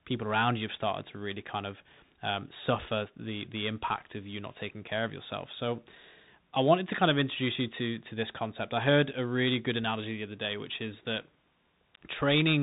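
Throughout, the speech has passed through a Bluetooth CVSD headset codec, coding one up-or-down bit per sample, which fits a 64 kbps link. Nothing above 3.8 kHz survives, s sounds turn scratchy where loud highs outrun the step size, and a plainly audible granular hiss sits underneath.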